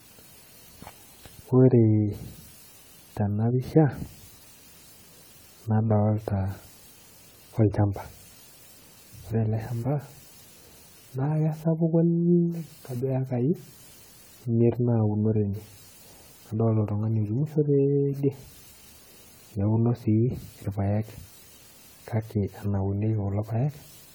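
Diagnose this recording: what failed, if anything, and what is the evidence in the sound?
The codec stage has failed, across the whole speech recording. The sound is swirly, hollow and smeared, more than a single encode at a rate that fits 64 kbit/s AAC-LC would explain, and consonant attacks blur. This is generation loss, likely from around seven successive AAC passes, each requantising on a shifted frame grid so that noise and spectral gaps pile up. A spectrogram would show patchy, hole-ridden bands beneath a 20 kHz ceiling, and the waveform would show softened onsets.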